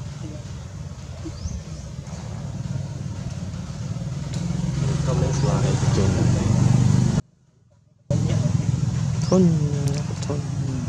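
At 7.2 s the sound drops away abruptly, not as a fade or natural pause, and for about 0.9 s, until 8.1 s, only a faint trace of it remains, roughly 35 dB below its normal level, before it returns just as suddenly. This is an audio dropout to a faint residue: the wanted signal was likely lost upstream for that stretch while the path after the break stayed live, carrying only a low leak through.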